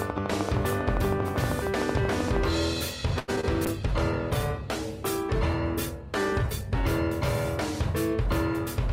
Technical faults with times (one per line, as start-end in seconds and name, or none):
0.02-2.37 train of clicks
3.19-3.30 short stall from a late packet
3.36-3.45 short concealed packet loss
3.66-6.83 call bitrate drop